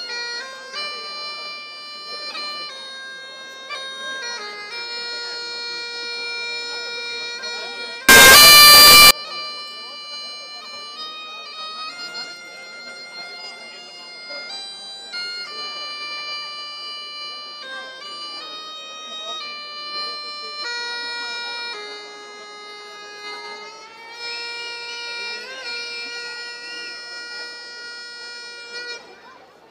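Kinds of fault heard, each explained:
Signed and unsigned mixed up: from 8.09 to 9.11 s the sound turns into very loud, harsh distortion, and low-level passages come out as loud as the strongest ones. The likely cause is 16-bit samples being read with the wrong sign convention, so the top bit is inverted. Every zero crossing then becomes a jump across the full range, and normal amplitude detail is replaced by large swings.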